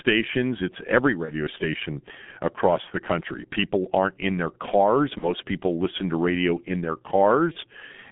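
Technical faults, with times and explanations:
Throughout, G.723.1 codec: a heavily compressed, very low-rate telephony coding that points to about 6 kbit/s keeps only 150 Hz to 3.6 kHz, leaving speech muffled, hoarse, with smeared consonants.
1.25–1.32 s, 5.18–5.29 s, 7.52–7.58 s, VoIP packet loss concealed by the speech codec: each gap fits one lost 30 ms frame; the decoder extends the previous sound, giving a brief buzzy or noisy, fading smear before recovery.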